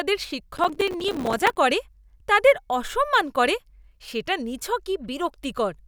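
Speech with processor overload crackle from 0.57 to 1.57 s, just before "করে তাদের অসম্মান করে": dozens of missed short buffers, around 5 ms each, leave silent gaps heard as gritty crackle.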